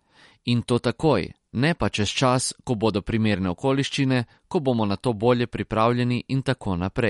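Throughout the speech, a hard treble ceiling near 11.2 kHz and a watery, swirling texture on s sounds are plainly audible, likely MP3 compression at a low bitrate around 48 kbps zeroing weak frequency lines frame by frame. A simple low-pass filter would dull the sound without that flickering swirl.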